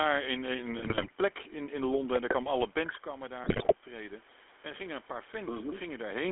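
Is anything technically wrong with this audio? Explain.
Yes. The whole clip carries GSM full-rate codec coloration. The band is held to roughly 300 Hz to 3.4 kHz, and the vocal-tract model driven by coarsely spaced excitation pulses leaves a buzzy, gravelly roughness on the speech, consistent with the 13 kbps full-rate coder.

GSM bit errors break in from 0.78 to 1.11 s and again from 3.44 to 3.74 s. Corrupted filter, pitch and gain parameters distort the spectrum and level frame by frame, producing squawks, pops and gargling. The second burst has the higher error rate.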